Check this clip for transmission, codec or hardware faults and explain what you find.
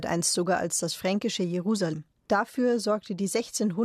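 One codec fault is present in this speech clip. At 1.92 s there is damaged data in a compressed stream: corrupted bytes make the decoder misread a frame, lose sync and hunt for the next header, giving a brief glitch about 16 ms long. Unlike a dropout, it comes from the decoder losing its place in the stream.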